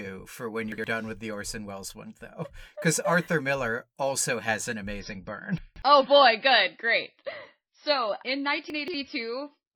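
Just after "for when", at 0.72 to 0.84 s, there's a chunks-out-of-order glitch. A 60 ms piece plays one slot late, so the sound jumbles before "with the". From 5.00 s, right after "also has an", the adaptive stream drops to a lower bitrate until the end. Everything above 5.8 kHz disappears and it turns swirly, which fits an MP3 falling from 128 to 24 kbit/s. Inside that stretch, at 5.58 to 5.82 s and 8.70 to 8.94 s, chunks land three places late and make the same jumbled scramble.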